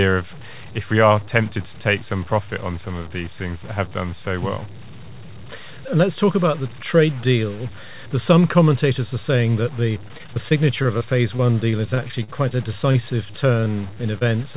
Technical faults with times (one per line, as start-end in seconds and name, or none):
0.00-14.57 low bit depth without dither
10.08-12.52 repeated packet loss (robotic sound)
12.92-12.96 short concealed packet loss
13.60-14.56 repeated packet loss (robotic sound)